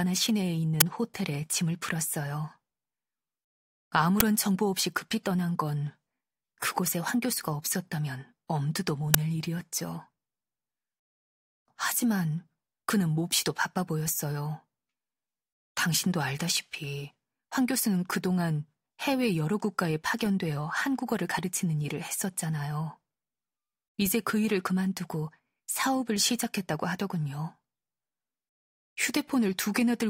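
Uninitialised buffer bursts at 0.81, 4.20 and 9.14 s are loud hiss of leftover memory, about 11 ms then 5 ms, fitting 512- and 256-sample buffers: noise-filled, not silent like dropouts.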